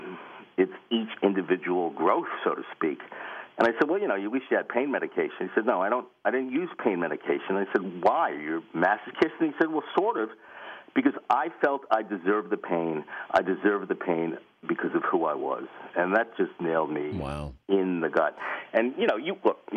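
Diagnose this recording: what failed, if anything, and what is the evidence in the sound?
Nothing in the recording points to a failure at any stage from capture through to playback. There is no audible evidence of a fault anywhere in the signal chain.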